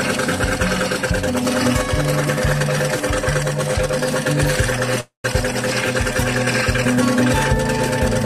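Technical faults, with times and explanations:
5.00 to 5.25 s, call audio freeze: packets were likely held up in transit, draining the jitter buffer. The last sound carries on as a fading buzz, then about 140 ms of silence, and the audio resumes where it stopped, nothing lost but now 0.24 s later.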